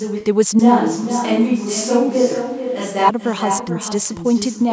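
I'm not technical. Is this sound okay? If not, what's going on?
No. Echo with no canceller runs through the whole clip: the other end played this speech through a loudspeaker, its microphone caught it, and nothing removed it. So every phrase returns about 0.4 seconds later as a quieter, thinner copy.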